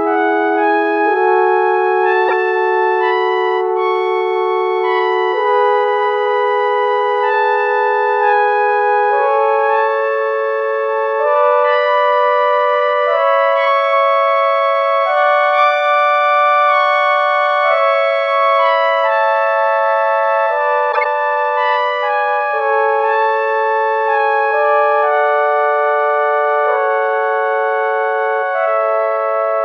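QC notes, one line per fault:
2.28–2.33 s, corrupt frame decoded. A short, loud glitch cuts across the sound, peaking around -5 dBFS. Damaged bits in the compressed data were decoded as if valid, so misread gains and codes put energy at the wrong frequencies. The length points to a few consecutive frames being hit.
20.92–21.06 s, corrupt frame decoded. A longer glitch, again peaking around -5 dBFS. The same decoding error spans more frames, which fits roughly five damaged ones.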